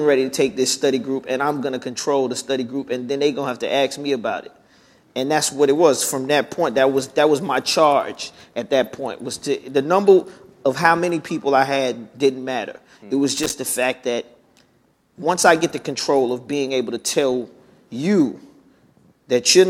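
At 13.37 s, loose connector crackle lasts about 0.15 s. A worn contact briefly makes and breaks, chopping the signal into an irregular scratchy burst.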